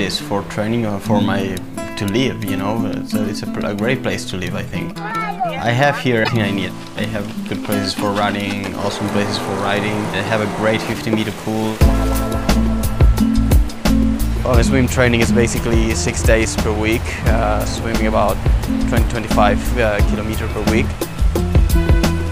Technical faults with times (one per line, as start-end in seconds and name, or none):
6.21-6.29 damaged data in a compressed stream